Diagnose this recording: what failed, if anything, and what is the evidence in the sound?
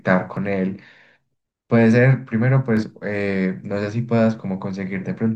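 One channel drops out from 0.37 to 2.77 s. The speech falls abruptly by about 6 dB for 2.4 s, then snaps back to full level. The likely cause is an intermittent analogue wiring fault, leaving the mono sum with only one channel's half.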